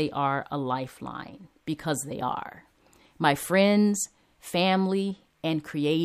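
Nothing goes wrong anywhere in this speech recording, so there's no technical fault to point to at any moment.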